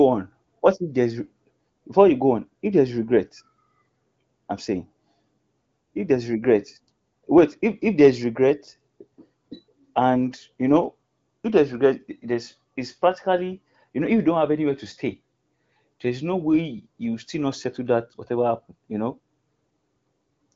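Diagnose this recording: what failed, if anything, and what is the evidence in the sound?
Nothing in this speech recording points to a failure at any stage. The audio has passed through an AMR wideband (HD Voice) codec, with content stopping near 7.6 kHz and speech staying clear with at most a faint coding texture, which fits a rate around 18.25 kbit/s.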